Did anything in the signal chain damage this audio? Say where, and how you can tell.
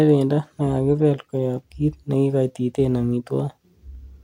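No, nothing in the chain audibly damaged this speech recording, and I can't point to any stage where it went wrong.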